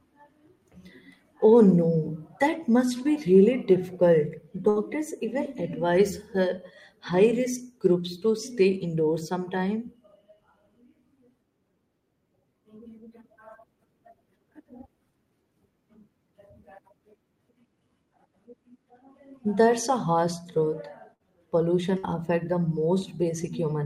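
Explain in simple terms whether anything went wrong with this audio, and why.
Three times in this speech recording, a burst of packet loss occurred: a short run of data never arrived in time, at 4.69 to 4.79 s, 21.14 to 21.23 s and 21.98 to 22.06 s. Each time, the receiver filled the hole by stretching the last sound it had for about 60 ms and letting it fade, giving a brief held buzz or fading hiss. Then the talking jumps ahead, skipping about 60 ms that is simply gone.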